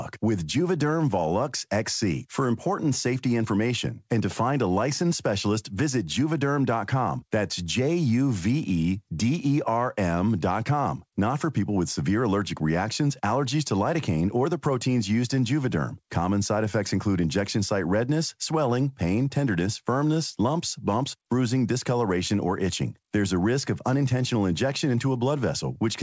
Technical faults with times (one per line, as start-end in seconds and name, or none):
none